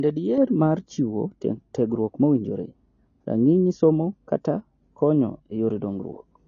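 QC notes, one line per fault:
Throughout, AAC compression: the speech is dull and smeared with a plainly audible warbling, fizzy texture, and nothing reaches above 6.9 kHz. The likely cause is low-bitrate AAC-LC coding, which fits roughly 24 kbps, lowering the cut-off and starving bands of bits.
0.38 to 6.48 s, de-emphasis applied wrongly: a smooth treble roll-off, about 11 dB down at 10 kHz relative to 1 kHz, muffles the speech further. A pre-emphasis-undoing filter acted on audio that never had that boost, or was applied twice, tilting the whole upper spectrum downward.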